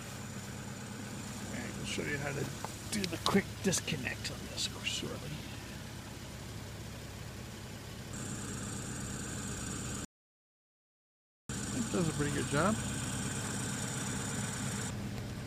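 An audio dropout to silence runs from 10.05 to 11.49 s. The sound stops abruptly mid-flow and is replaced by about 1.45 s of silence, with no room tone or background noise underneath, before cutting back in just as suddenly. The likely cause is a momentary loss of the input, such as a device disconnecting or a brief mute, while the recorder kept writing silence. Whatever occurred during that stretch is missing.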